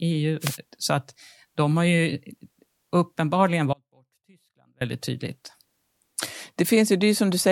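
At 0.40 s the radio link of an analogue FM wireless microphone fades as reflections cancel, so receiver noise surges up over the speech. This wireless microphone noise hit is heard as a short swish of static that clears by 0.58 s.

From 3.73 to 4.81 s the wanted signal is most likely lost while the path after the break stays live, causing an audio dropout to a faint residue. For about 1.08 s the speech cuts out abruptly, leaving only a faint trace roughly 35 dB below normal.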